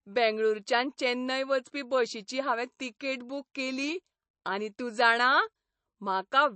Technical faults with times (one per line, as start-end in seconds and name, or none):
0.00-6.55 MP3 compression